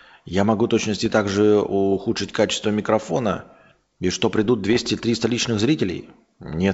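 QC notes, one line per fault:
1.02–1.21 s and 4.70–4.94 s, bit errors on an ADPCM link: about 0.3 percent of bits flip in the G.722 stream, throwing the decoder's step size and predictor off, so pops and rough, level-jumping bursts ring on briefly.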